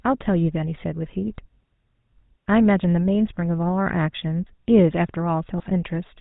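A buzzy, gravelly roughness runs through the whole of this speech recording, with a dull top end that stops at 4 kHz. That is the sound of the GSM full-rate codec. It rebuilds the voice from a vocal-tract filter driven by a sparse, regularly spaced pulse train, and the codec damage here is plainly audible, consistent with the 13 kbps full-rate scheme. Near the end, from 5.58 to 5.64 s, the voice briefly breaks into a squawking, gargling burst. These are GSM bit errors. Corrupted bits reaching the decoder garble the filter, pitch or gain values for a few consecutive frames, so the spectrum warps and the level lurches for that instant. A burst this dense points to a badly degraded radio link.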